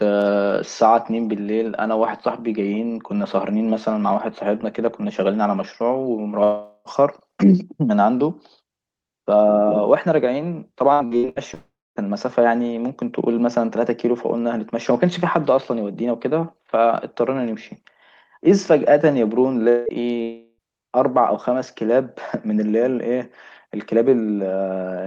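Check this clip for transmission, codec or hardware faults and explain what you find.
Five network faults occur, heard over a call-codec path whose top end stops near 12 kHz, which fits Opus at around 32 kbps.

Long network dropout, 6.43–6.88 s, 11.54–12.03 s, 19.69–19.89 s and 20.22–20.61 s: the sound smears into a fading buzz for up to about 0.42 s, going fully silent for about 0.25 s in the 11.54 s one. The likely cause is a long run of missing packets. Unlike repeated loss, each is one unbroken hole.

Repeated packet loss (robotic sound), 10.93–11.39 s: four short gaps, the longest 68 ms, leave over half the stretch patched, giving choppy sound with pieces missing. The many quick patches separate it from a single dropout.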